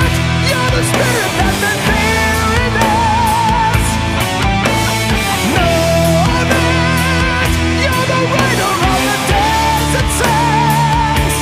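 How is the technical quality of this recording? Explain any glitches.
No glitches: nothing in the recording stands out as a technical fault.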